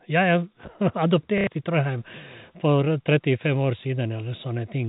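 Speech carried over a G.711 telephone path, with its band ending at 4 kHz, has one dropout from 1.38 to 1.47 s caused by packet loss with the last packet repeated. For 90 ms the receiver replays the same short block, which fits three lost 30 ms packets, so the sound stutters robotically with a buzz near 33 Hz. A waveform shows identical repeated segments, and a spectrogram shows frozen, copied columns.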